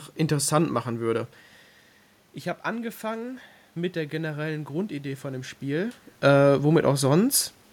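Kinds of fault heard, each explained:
Automatic gain rising, 2.68 to 6.03 s: the input level drops by about 12 dB, so the gain control judges it too quiet and slowly lifts its gain by about 4 dB, making voice and room noise swell together over those three seconds.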